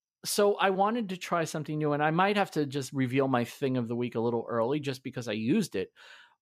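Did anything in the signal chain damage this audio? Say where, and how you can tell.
No, nothing along the chain audibly damaged this speech recording; the signal stays intact and continuous at every stage you can hear.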